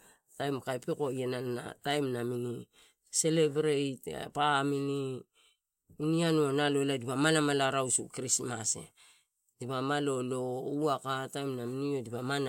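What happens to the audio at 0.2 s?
Nothing goes wrong at 0.2 s; the speech there plays through intact, with no dropout, click or distortion.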